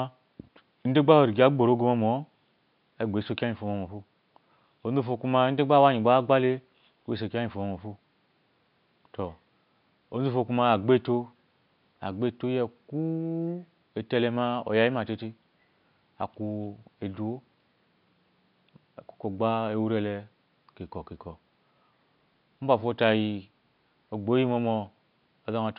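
No system faults are audible anywhere in the speech, with the room's background sitting about 44 dB below the voice.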